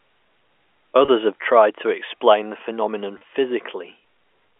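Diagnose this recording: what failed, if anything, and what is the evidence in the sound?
Brief buzzy holds at 1.05 s and 3.18 s point to packet loss with pitch repetition at the network stage. Each 30 ms gap was filled by replaying the last pitch period.

At 1.32 s the speech and background drop together by about 4 dB in one step. This is likely call processing stepping the microphone volume down.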